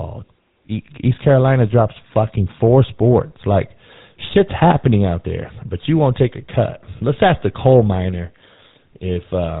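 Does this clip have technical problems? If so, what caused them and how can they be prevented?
Yes. The speech carries GSM full-rate codec damage from start to finish. It is plainly audible as a buzzy, gravelly roughness. Nothing passes above 3.8 kHz. The coder models the vocal tract and drives it with sparse, regular pulses. This fits a 13 kbps stream. To prevent it, record or transmit over a wideband path with a modern codec.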